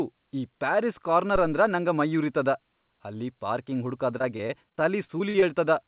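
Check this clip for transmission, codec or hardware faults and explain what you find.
Two faults are audible in this speech clip.

From 1.36 to 1.63 s there is a phantom power thump. A supply switched on or off on a live input, sending a deep thump that decays within about 62 ms.

From 4.18 to 5.44 s there is repeated packet loss, heard as robotic sound. About a dozen short gaps, the longest 44 ms, are patched by extending earlier sound, which makes the speech choppy.

The call path limits everything to below 4 kHz, which fits G.711 telephone coding.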